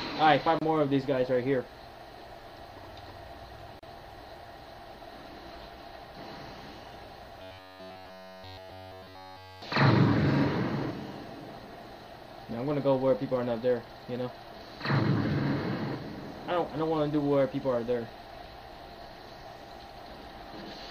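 At 0.59 s and 3.79 s, a gap at a join of encoded pieces cuts the sound: silences of 26 and 35 ms, smeared at the edges, where separately encoded segments met untrimmed. From 7.42 to 9.62 s comes robotic sound from repeated short buffers. A rigid metallic buzz at 93.8 Hz appears, likely from one 10.7 ms chunk looping in place of nearly all new audio.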